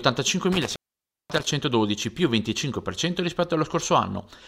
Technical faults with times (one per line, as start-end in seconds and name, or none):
0.52-1.52 intermittent contact